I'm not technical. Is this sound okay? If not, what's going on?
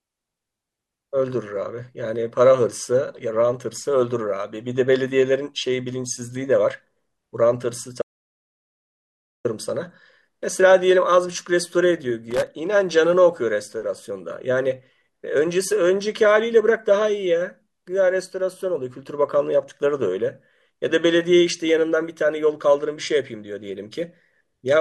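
No. At 8.02 s the speech cuts to complete silence until 9.45 s. That is an audio dropout to silence, likely from a lost input connection. About 1.4 seconds of speech is simply gone. From 12.31 to 12.48 s there's a short burst of scratchy crackle. That's loose connector crackle: a worn or dirty contact briefly breaking the signal.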